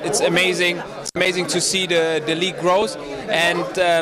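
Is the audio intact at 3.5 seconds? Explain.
Yes, the audio at 3.5 seconds is intact, with no dropout, click, distortion or other fault at that moment.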